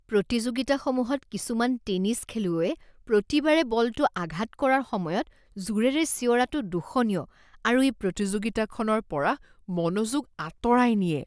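A speech clip that runs at its proper rate until 8.17 s, then shows a wrong sample rate to the end: the audio slows to about 0.92 times speed and drops roughly 1.5 semitones, which fits 24 kHz material played at 22 kHz without conversion. On a spectrogram, harmonics and formants shift down about 8 percent and stretch in time. The waveform's cycles visibly lengthen.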